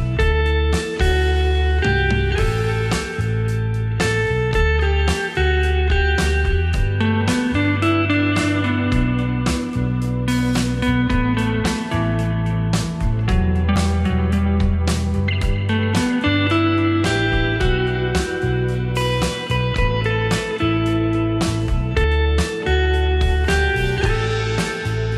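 At 13.76 s and again at 22.04 s there is a sudden jump forward in the sound, with no gap of silence. This is likely a dropped buffer (overrun): samples were overwritten before being read, losing roughly 40 ms, then about a tenth of a second.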